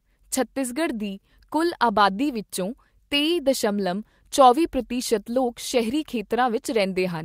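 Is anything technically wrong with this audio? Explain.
No, nothing technically wrong can be heard in this speech recording; the signal holds steady throughout with no audible faults.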